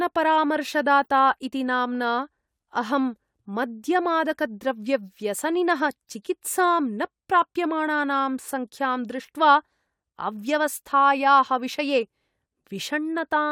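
A brief chirp sits at 1.03 to 1.08 s, just before "इति नाम्ना", and a much fainter blip comes at 9.72 s, ahead of "अव्यवस्थायाः विषये". Both are corrupt frames decoded: flipped bits across a few frames misplaced energy in frequency.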